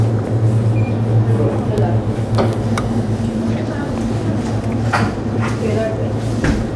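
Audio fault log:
Nothing heard departs from the recorded material.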